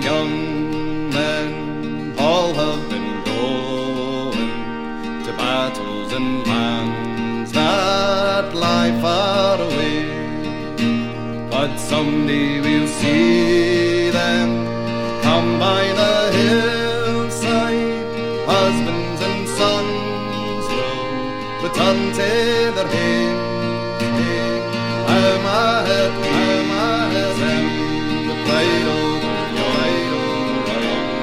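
From 24.12 s to the end there's a doubled audio track: a second full-band copy comes in abruptly, trailing the original by about a second and a half and sitting roughly 5 dB lower. It's dry, with no decay, most likely from an out-of-step edit or a slower second capture path.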